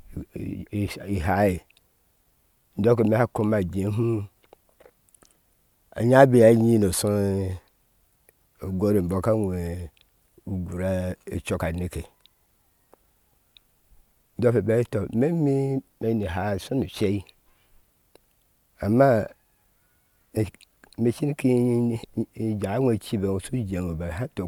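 No technical faults can be heard anywhere in the speech recording. Nothing in the sound stands out as a fault at any point in the clip.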